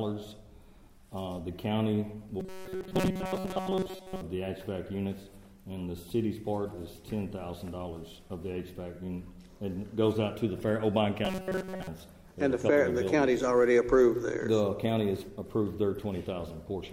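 From 2.4 to 4.21 s and again from 11.25 to 11.87 s, new audio likely arrived too seldom, so roughly 5.3 ms buffers were replayed over most of the skipped material. The result is robotic sound from repeated short buffers: a rigid, metallic 188 Hz buzz.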